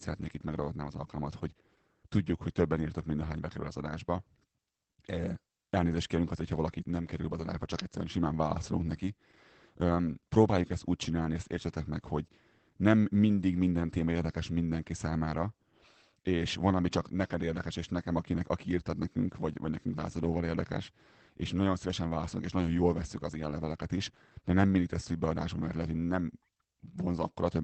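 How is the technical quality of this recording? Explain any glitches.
The recording has one fault that runs through the whole clip: plainly audible Opus voice compression. Throughout, the speech is cut off above roughly 8 kHz, the wideband limit of the SILK linear-prediction coder. SILK models the voice as a filter driven by an excitation signal. At a low bitrate that excitation is quantised coarsely, so the voice sounds muffled, hoarse and faintly robotic. The artefacts point to roughly 12 kbps in SILK-only mode, with 20 ms frames.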